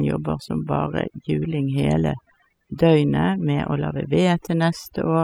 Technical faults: overdone noise removal

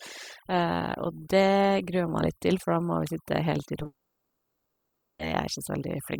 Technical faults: overdone noise removal; short concealed packet loss; long network dropout

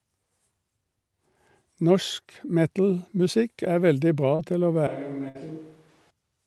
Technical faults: short concealed packet loss; switch to a distant microphone; burst of packet loss

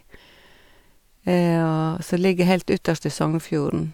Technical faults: none

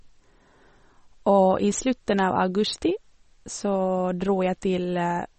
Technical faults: MP3 compression

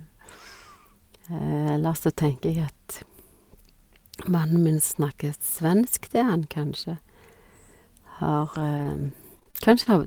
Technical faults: scattered short gaps

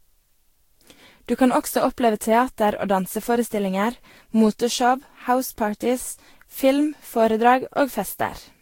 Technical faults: generation loss

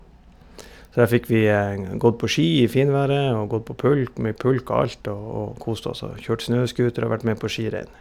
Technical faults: none

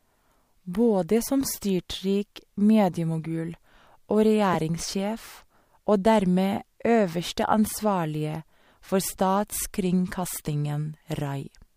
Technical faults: corrupt frame decoded

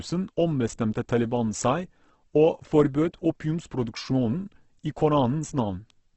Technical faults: Opus compression

